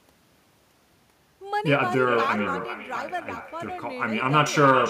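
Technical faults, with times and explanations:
Throughout, echo with no canceller: each phrase returns as a distinct, thinner copy around 400 ms later and about 10 dB down. The far end's loudspeaker feeds its microphone, and that pickup is sent back over the network unremoved, so the repeat comes back as a separate delayed copy, unlike a smooth room reverb tail.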